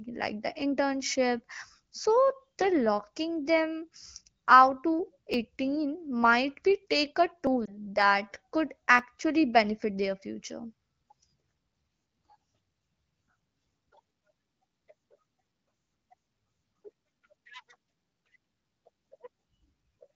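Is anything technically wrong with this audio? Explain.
Yes. The clip has two kinds of fault: three short skips and one brief codec dropout.

Dropped buffer (overrun), at 5.34 s just after "out to", at 7.47 s, and at 8.99 s just before "benefit their". The likely cause is the program failing to collect its audio before the hardware overwrote it, so a slice vanished and the two sides were butted together. Each one is heard as the speech jumping forward, with no gap. About 30 ms goes missing at 5.34 s, a very short sliver at 7.47 s, and around 20 ms at 8.99 s.

Lost AMR speech frame, from 7.65 to 7.75 s, right after "might be take a". One 20 ms frame was corrupted in transmission and failed its check. The AMR-WB decoder covered the gap by reusing the previous frame's pitch and vocal tract settings at reduced gain. This is heard as a quick dip or warble in the voice, which then sounds weak or rough for a moment as the decoder recovers.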